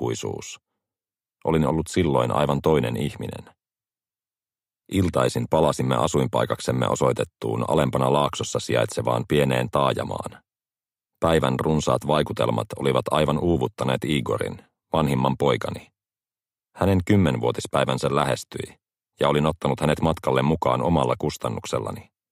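No audible faults turn up anywhere in the recording.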